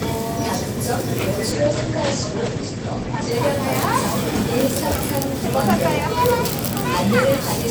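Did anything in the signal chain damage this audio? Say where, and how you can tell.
Yes. From 1.52 s to 3.37 s the sound turns rough and watery, and the top end vanishes, with the cut-off falling from 20 kHz to about 8 kHz and staying there for roughly 1.8 s before full brightness returns. This is a call bitrate drop at the codec stage. The call's bandwidth estimate collapsed, so the encoder was told to spend far fewer bits. The coarser coding and narrowed band point to a fall from around 96 kbps to around 14 kbps.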